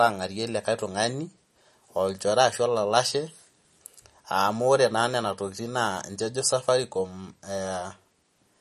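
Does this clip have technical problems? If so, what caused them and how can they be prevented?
Yes. Throughout the speech, the sound is watery and swirly, with chirpy sibilants and nothing above 13 kHz. This is likely MP3 compression at a starved bitrate, around 40 kbps. A spectrogram shows a hard ceiling at 13 kHz and flickering, patchy upper bands. Encoding at a higher bitrate, or keeping a lossless master, would prevent it.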